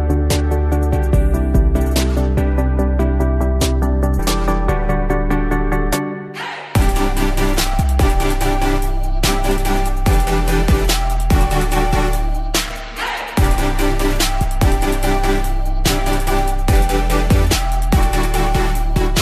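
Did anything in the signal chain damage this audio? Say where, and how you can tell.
Yes. At 4.18 s the sound jumps forward abruptly, with a small blip at the join where the material before and after doesn't line up. That discontinuity likely comes from a stream segment skipped during playback or network delivery: one chunk of a segmented stream failed to arrive or decode, and the player moved straight on to the next, so a stretch of the programme is simply missing rather than silenced or smeared.

Loose connector crackle in the analogue wiring appears twice, from 7.56 to 7.80 s and again from 12.66 to 12.77 s. Each is an irregular burst of scratchy crackle, not a steady hiss or a regular click train. That points to a worn or dirty contact making and breaking as it shifts, chopping the signal on and off, with any DC on the line turning each reconnection into a pop.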